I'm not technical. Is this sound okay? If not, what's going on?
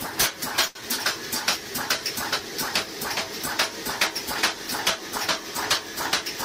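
No. There are two brief glitches, both close together near the start.

From 0.67 to 0.77 s there is a short stall from a late packet. A piece of the sound arrived late, so the receiver held the last sound for about 78 ms until it came. Nothing is lost, but that moment drags slightly and the audio then runs a little behind.

From 0.81 to 0.83 s there is a short concealed packet loss. About 20 ms of sound never arrived in time. The receiver briefly continued the last sound and then blended back into the real audio, so you may hear a tiny smear or wobble. That small chunk is gone, and the audio catches up a little.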